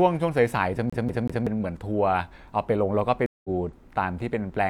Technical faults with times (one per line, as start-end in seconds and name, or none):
0.90-1.47 CD stuck on one turn
3.26-3.49 stream reconnect